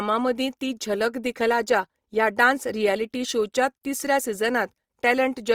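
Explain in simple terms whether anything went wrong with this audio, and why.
The speech sounds grainy and rough throughout. The likely cause is Opus compression: with too little data to work with, the encoder filled parts of the sound with noise-like stand-ins for the real detail, leaving it coarse rather than muffled.

At 3.15 s there is a single sharp click, likely from dropped samples. A tiny sliver of the recording, a small fraction of a millisecond, went missing, so the waveform jumps abruptly from one point to a later one.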